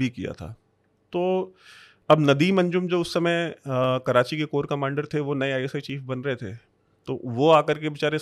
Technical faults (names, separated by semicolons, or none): clock drift buffer slips